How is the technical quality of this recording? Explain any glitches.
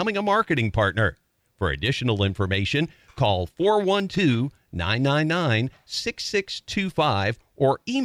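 The recording has one glitch, a short burst of processor overload crackle from 4.0 to 4.21 s, just after "additional information call". The processor could not finish its small audio buffers in time, and several deadlines in a row were missed. Each missed block, around 10 ms long, was skipped outright, leaving hard-edged gaps in the speech. Strung together, these gaps sound like a gritty, tearing crackle that stops once the load passes.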